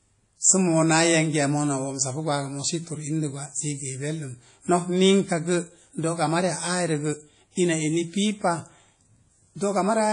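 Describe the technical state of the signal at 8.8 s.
WMA compression is present at 8.8 s and throughout: long-block transform coding at what sounds like about 32 kbps smears ringing, washy quantisation noise around the speech. Nothing remains above 10.1 kHz, likely from this codec.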